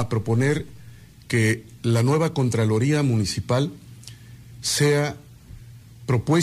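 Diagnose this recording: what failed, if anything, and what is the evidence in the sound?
Nothing in the recording points to a failure at any stage of the chain. No event anywhere in the clip calls for a diagnosis.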